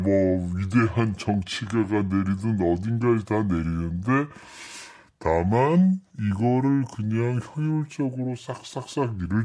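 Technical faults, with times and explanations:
Throughout: wrong sample rate. The speech runs at about 0.69 times its natural speed and sits about 6.45 semitones low, so voices come across deep and dragged. Speed and pitch have dropped by the same ratio, which means the samples were clocked out more slowly than they were captured, with no resampling in between. A ratio of 0.69 fits material recorded at 32 kHz and played back at 22 kHz.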